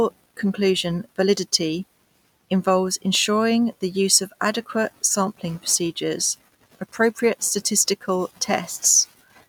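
The speech recording has no technical faults in the signal at any point.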